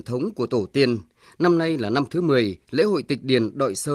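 Nothing stood out as a technical fault on listening to this speech.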